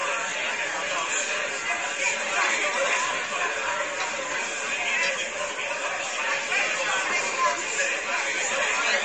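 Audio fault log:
throughout: MP3 compression, likely. Nothing above 8.5 kHz and plainly audible coding damage, which fits about 37 kbps starving the encoder so it drops treble and weak detail.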